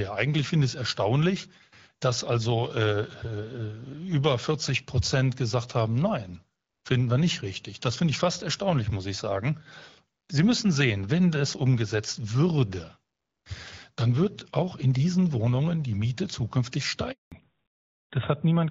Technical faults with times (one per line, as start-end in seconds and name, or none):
17.12-17.32 handover gap
17.32-18.70 fallback to narrowband